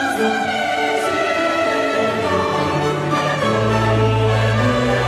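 No technical faults can be heard anywhere here.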